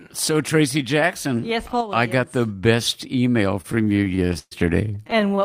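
Repeated stalls (stutter) hit the speech from 3.61 to 4.53 s and again from 4.95 to 5.39 s. Packets arrived later than playback needed, so the jitter buffer kept draining and the receiver stretched the last sound to bridge each hole. The first run holds twelve stalls, about a third of its span, the longest 128 ms, faded in the longer waits. The second holds nine, none over 20 ms. Nothing drops out, but delivery drags and stutters.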